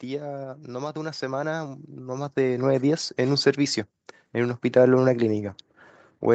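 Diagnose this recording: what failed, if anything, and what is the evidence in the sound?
The fault is automatic gain rising, and it sits in the call processing stage. From about 0.06 s to 3.65 s the whole clip swells steadily by about 12 dB, with the speech and the background noise floor coming up together. That shared rise is the tell: the gain control judged the input too quiet and kept turning itself up. A louder talker would lift only the speech. The top end stopping around 8 kHz fits a wideband call codec.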